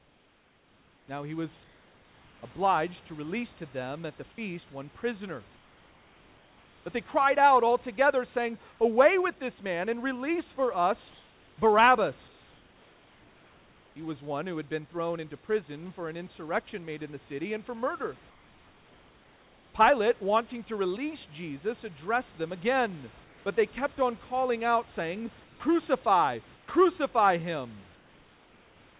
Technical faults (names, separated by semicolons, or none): comfort noise in place of the background